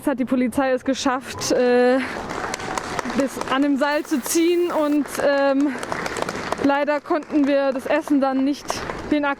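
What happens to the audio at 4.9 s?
At 4.9 s the audio is near the end of a stuck bit span running from 3.91 to 4.96 s. It sounds harsh and buzzy, with noise filling quiet moments. The likely cause is one converter bit held fixed, which shifts about half the samples by a step of around -40 dBFS.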